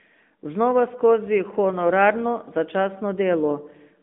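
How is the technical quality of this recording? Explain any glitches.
The recording has been through an AMR narrowband mobile codec, and the damage is plainly audible across the whole clip. The speech sits in a 200 Hz to 3.6 kHz telephone band, with nothing above about 3.7 kHz. AMR-NB samples at 8 kHz and rebuilds each 20 ms frame from a vocal-tract filter excited by a few pulses. The resulting buzzy, synthetic edge fits a mid-range mode of around 10 kbps.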